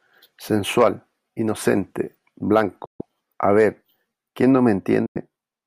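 Speech with two Bluetooth dropouts, at 2.85–3.01 s and 5.06–5.17 s. The sound cuts to silence and then resumes further on, skipping ahead rather than pausing, which is likely due to wireless packets arriving too late.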